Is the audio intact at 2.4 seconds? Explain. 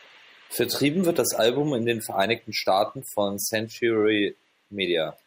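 Yes, at 2.4 seconds the audio is intact: no dropout, glitch or other fault is heard at that moment.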